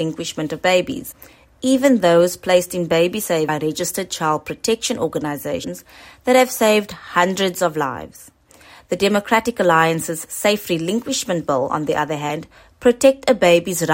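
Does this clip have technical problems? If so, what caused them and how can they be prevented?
Yes: damaged data in a compressed stream gives brief glitches at 1.11, 3.48, 5.63 and 12.29 s. Corrupt bytes make the decoder misread frames and resync. Prevent it with checksummed, error-corrected storage and transmission.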